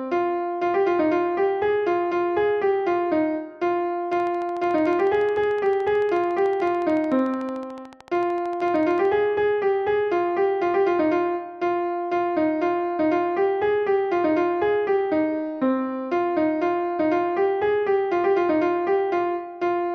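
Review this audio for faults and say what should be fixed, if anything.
A train of clicks runs from 4.13 to 9.06 s. The clicks are evenly spaced at 13.6 per second, roughly seventy in all. Each has much the same shape. They peak at about the level of the sound itself, so they tick clearly over it and through any pauses. A steady pulse like this is likely interference from nearby equipment or a faulty connection or power supply. To prevent it, move or power down nearby gear and check the interface's connection and settings before recording.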